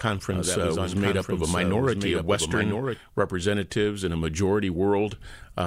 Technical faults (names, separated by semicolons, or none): doubled audio track